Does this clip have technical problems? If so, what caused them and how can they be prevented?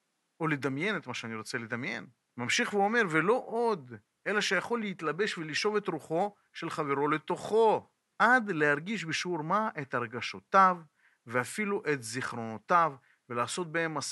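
No technical faults are present.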